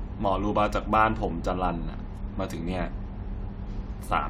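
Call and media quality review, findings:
Sample clock jitter, 0.00 to 2.57 s. Fine hiss and grit riding on the speech, worst on loud and bright sounds, gone in the gaps. Probable component: ADC clock. Unstable timing of a few microseconds samples steep waveform slopes early or late, leaving error around 35 dB below the signal. Clean from 2.57 s on, so look at what the clock was doing at the start.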